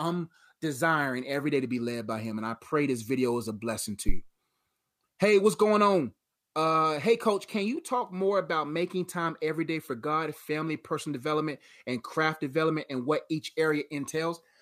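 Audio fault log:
4.09–4.22 s phantom power thump: after "is a blessing to", a supply switching step passes through the input's coupling capacitors, giving a single deep thump at about −12 dBFS that dies away within 29 ms, without the rattle or rubbing of a handling bump.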